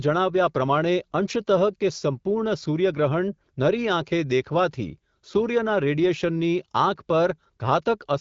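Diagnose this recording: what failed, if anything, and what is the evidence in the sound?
Nothing failed; the speech carries no audible faults.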